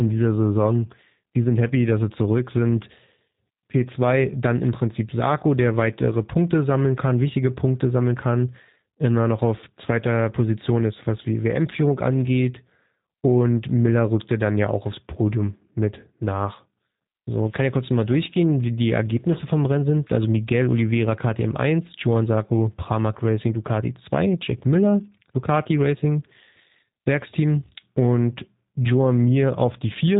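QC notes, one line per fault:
Throughout, G.729 codec: nothing gets through above 3.8 kHz, and the speech has a plainly audible rough, synthetic edge. Each 10 ms frame is rebuilt from a vocal-tract filter, a pitch predictor and a few pulses, which fits an 8 kbit/s G.729A stream.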